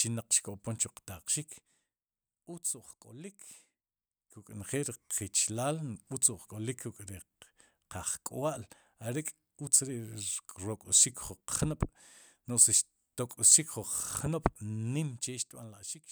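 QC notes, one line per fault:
4.28–4.72 s, zipper noise: a level move of around 10 dB is made in 1 dB jumps at roughly 30 per second. Each unsmoothed jump puts a small click into the speech, so a fine ticking rides on it only while the level is moving. That ties it to the gain change rather than to dropouts or codec glitches.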